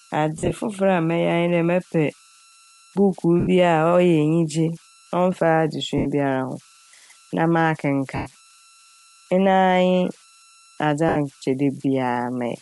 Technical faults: converter idle tones; Bluetooth LC3 compression; lost LE Audio frames

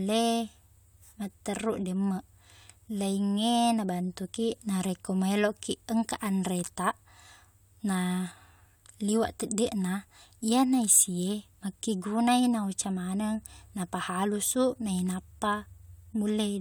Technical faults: none

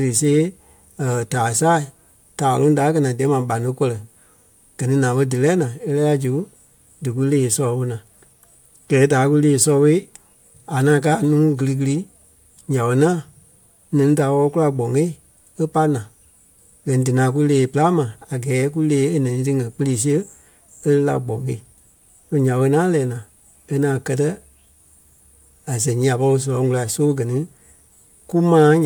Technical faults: none

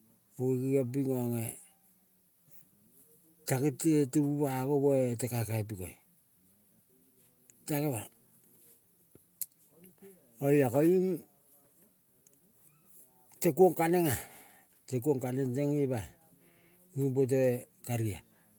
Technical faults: none

